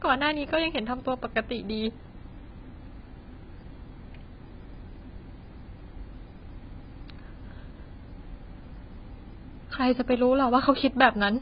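Throughout the speech, nothing reaches above 5 kHz. The sound is dull and smeared, with a warbling, fizzy edge on sibilants. This is likely heavy AAC compression, AAC-LC at a very low bitrate, which fits about 16 kbps. The codec cut the high band and coarsely quantised what remained.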